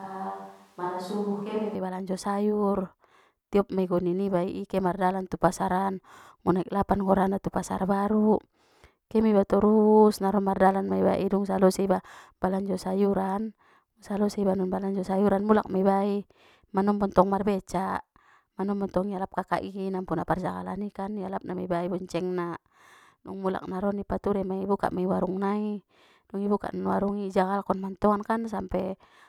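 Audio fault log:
0.00–1.75 s, switch to a distant microphone: under way from the start, the speech is roomy, hollow and thin in the bass, about 5 dB quieter with faint room noise, then turns abruptly close at "i balanjo sayur", likely because a farther microphone stood in for the close one.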